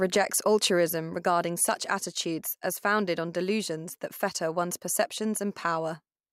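A speech recording with nothing technically wrong with it.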